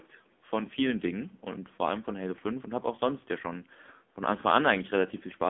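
AMR narrowband mobile codec damage runs through this whole speech clip: nothing passes above about 3.6 kHz, the line band sits near 200 Hz to 3.5 kHz, and heavy coding artefacts make the voice buzzy and synthetic, which points to a low bitrate around 6.7 kbps.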